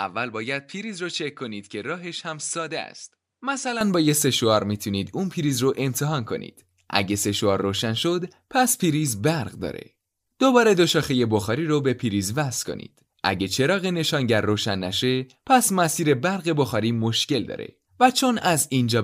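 A speech recording whose input was likely switched to a poorer device for the opening stretch, from 0.0 to 3.81 s, before the main microphone takes over. That first device passes nothing above 10.3 kHz, so the opening sounds duller and less airy, sits about 10 dB quieter, and carries its own faint background noise well below the speech. At 3.81 s the sound brightens and jumps up in level with no gap, because the change between devices is seamless.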